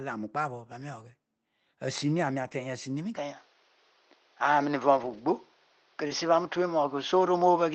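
Speech, carried over a call path using the Opus codec. Lost packets were rebuilt from error correction four times, at 0.95 to 0.97 s, 2.43 to 2.53 s, 4.97 to 5.19 s and 6.09 to 6.11 s. Each time, the next packet carried a low-quality spare copy. So there is no gap, but those stretches sound rougher and noisier. The longest lasts about 120 ms. From 3.16 s to the end, the sound turns duller and thinner, with nothing above 6.5 kHz. New background noise sits roughly 40 dB down, and the level shifts by roughly 5 dB. There is no silence at the change. This is likely the input switched to a poorer device. Around 6.07 to 6.11 s there is also a short concealed packet loss. About 20 ms never arrived in time. The decoder extended the preceding sound to fill it, leaving a brief smear before the real audio resumes.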